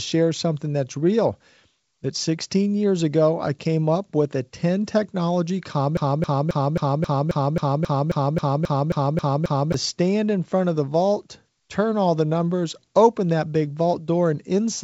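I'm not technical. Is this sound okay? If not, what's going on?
No. From 5.97 to 9.74 seconds the speech gets stuck: a tiny snippet, about 0.27 seconds long, plays again and again, 14 times back to back, like a scratched CD. This is a broken-record loop. The likely cause is that the player or stream stalled and kept repeating the last scrap of audio it had. Whatever should have been heard in those nearly four seconds is missing.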